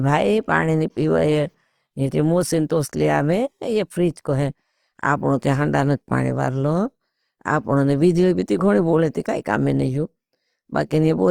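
From start to finish the speech carries plainly audible Opus compression damage, most likely from the codec's music (CELT) mode at a low rate, something like 24 kbps. Bandwidth isn't the casualty here; content reaches up to about 20.2 kHz. What suffers is texture. With too few bits, the encoder keeps each band's energy but fills the detail with folded or noise-like content, so voiced sounds come across rough and grainy rather than swirly.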